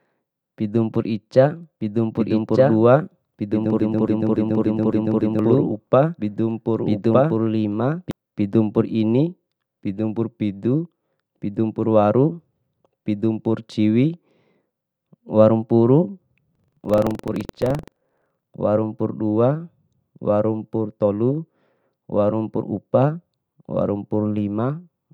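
From 1.81 to 8.11 s a doubled audio track appears. An equally loud copy trails by about a second, likely from a second, slower capture path.

From 3.80 to 5.39 s a broken-record loop repeats a 282 ms fragment six times. A stalled player or stream is the likely cause.

From 16.51 to 18.55 s buffer tearing adds a robotic 23.4 Hz buzz, which fits a 2048-sample buffer. A small slice of audio about a tenth of a second old replaces part of each period.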